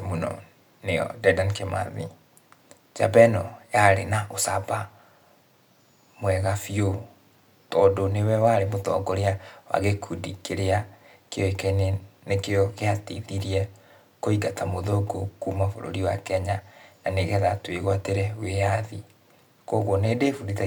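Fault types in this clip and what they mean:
No faults detected here.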